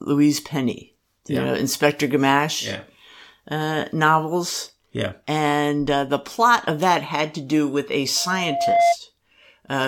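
Loudspeaker feedback squeal appears from 8.16 s to 8.97 s, right after "to do with a". The microphone is hearing the loudspeaker it drives, and around 688 Hz the loop gain tips past one, so that frequency feeds on itself. It swells over roughly three quarters of a second into a howl, ending up about 5 dB louder than the speech beneath it.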